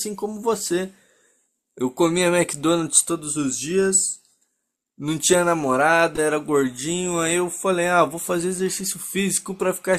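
Listening through the recording, nothing stood out as a technical problem at any point.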